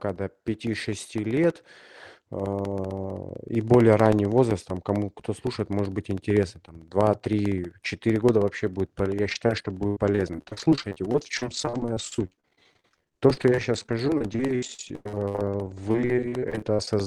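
From 0.09 s to the end of the speech, periodic USB or driver dropouts cut in every 64 ms, about 15 times a second. Each time, a background task stalls the audio driver or bus and a little audio is replaced by silence. The result is a steady, evenly spaced ticking that sounds only while the talker is producing sound. Unlike network loss, these holes are clock-regular, very short, and empty rather than filled.

From 9.23 s to 16.88 s, repeated packet loss (robotic sound) is layered on top. Packets arrive missing or late over and over, and the receiver patches each hole by stretching the last bit of sound, with the longest gap at 96 ms. About a quarter of this stretch is concealed, roughly 1.9 s in total. Because the gaps are filled rather than silent, the speech turns choppy, with syllables smeared or dropped. The Opus call path carries it all with its usual coding noise, and the top end stops at 12 kHz, which fits a stream of around 32 kbps.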